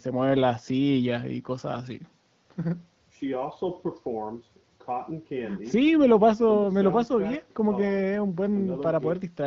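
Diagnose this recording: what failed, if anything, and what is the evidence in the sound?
Nothing failed; the wideband phone-codec path sounds as expected.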